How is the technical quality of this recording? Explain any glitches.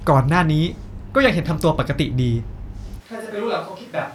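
The recording has one glitch, a switch to a distant microphone near the end. At 3.02 s the speech turns suddenly roomy and hollow, and it stays that way to the end. The bass thins out. The level drops by about 10 dB. Room noise rises to roughly 25 dB below the speech. The likely cause is that the close microphone's signal dropped out, leaving only a microphone much farther away. That picks up more room reflection and ambient noise.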